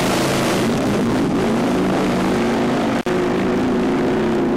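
A loose cable or plug briefly loses contact between about 2.98 and 3.09 s, an intermittent contact fault in the signal chain. The connection lets go and the sound cuts out for roughly 53 ms, with crackle as the contacts part and again as they reseat. While the line is open, the sound is replaced by faint hiss. It is a short, rough break.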